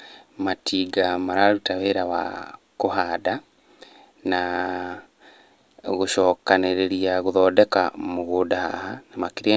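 No technical faults are audible.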